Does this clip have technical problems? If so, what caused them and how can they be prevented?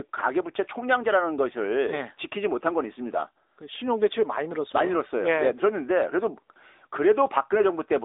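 Yes, the whole clip has been through an AMR narrowband mobile codec. The speech sits in a 300 Hz to 3.7 kHz phone band, nothing survives above 3.8 kHz, and the clearly buzzy, synthetic edge fits a mode around 10.2 kbps. Record over a wideband path instead.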